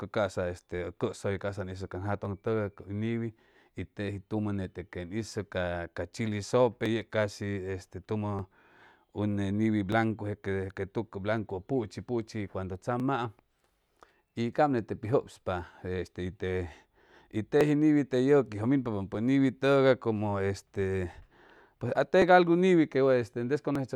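From 0.72 s to 23.75 s a click recurs every 1.54 s, about fifteen in all, while the speech plays. These are clock drift buffer slips, likely from two clocks differing by around a tenth of a percent, so a block of several dozen samples is dropped or repeated at each slip.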